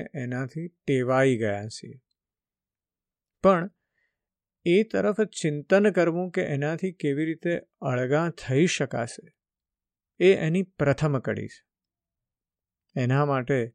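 No technical fault can be heard anywhere in this speech recording, and the signal stays steady and intact throughout.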